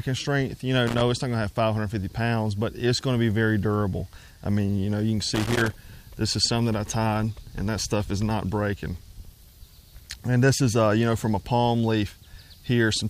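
Loose connector crackle appears from 0.87 to 1.01 s and again from 5.35 to 5.73 s. A worn or dirty contact keeps making and breaking as it shifts, so the signal is chopped into fragments. Each burst is heard as irregular scratching crackle, the second one longer.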